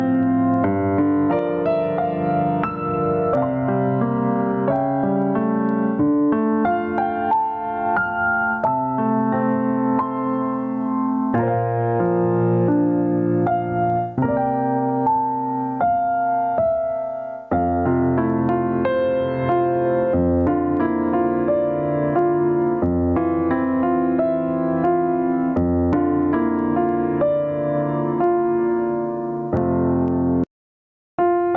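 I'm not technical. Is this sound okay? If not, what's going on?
No, it isn't. All the way through, the volume keeps getting pulled down under each loud sound, and everything feels squashed, with loud and soft parts pushed closer to one level. This is gain pumping, likely from the input being set far too high and an automatic limiter yanking the volume down hard on every loud moment.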